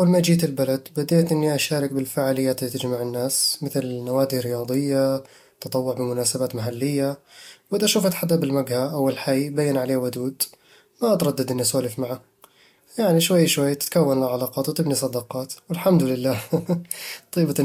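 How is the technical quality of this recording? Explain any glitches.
The recording carries sample clock jitter throughout: an unsteady converter clock mistimes samples, adding roughness on loud, bright speech about 40 dB down, from roughly a microsecond of timing error.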